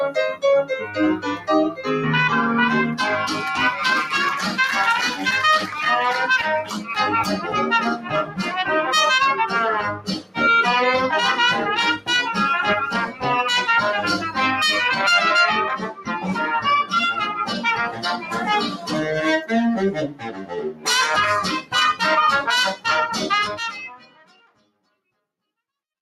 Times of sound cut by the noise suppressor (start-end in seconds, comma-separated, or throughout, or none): 0.35-1.85, 6.64-8.43, 9.94-10.38, 13.06-13.24, 15.81-18.93, 20.08-20.87, 23.89-24.87